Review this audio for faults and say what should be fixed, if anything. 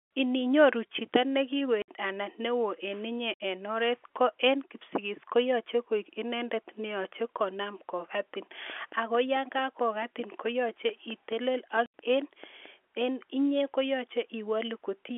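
Packet loss filled with silence occurs at 1.82–1.88 s after "chito ne", at 3.34–3.40 s after "ne oo en inye", and at 11.86–11.93 s. Gaps of 60, 60 and 80 ms point to runs of three and four 20 ms packets replaced by silence, with abrupt edges. Adding jitter buffering and packet loss concealment at the receiver would prevent this.

A train of clicks runs from 8.70 s, just after "ne yache konam kokatin", to 12.67 s. About twenty regularly spaced pulses arrive at 4.55 per second and peak roughly as loud as the speech, ticking through pauses too. The likely cause is electrical interference or a faulty connection or power supply. Isolating nearby equipment and checking connections and the power supply would prevent this.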